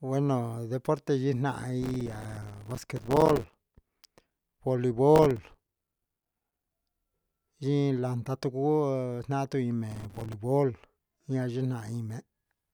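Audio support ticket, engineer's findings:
Processor overload crackle, 1.82–3.55 s, 5.16–6.65 s, and 9.92–10.33 s just after "naan tii". Gritty tearing over the speech. Audio processing thread is missing buffer deadlines in runs, each miss dropping a short slice to silence with hard edges. Gap length fits buffers of around 3 ms. Waveform: dense comb of tiny flat gaps. Spectrogram: clustered broadband vertical striations across each span. Stops when the load clears.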